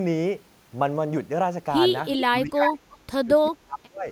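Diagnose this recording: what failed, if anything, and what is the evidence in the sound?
Call processing: an echo canceller likely let loudspeaker pickup through, returning a copy delayed about 370 ms at 2.12–2.24, 2.62–2.73 and faintly 2.92–2.97 s. This is echo leak.

Speech suppressed in double talk: the canceller likely mistook the talker for echo and turned both down, dropping the sound by up to about 35 dB across 2.26–2.81 and 3.22–4.08 s.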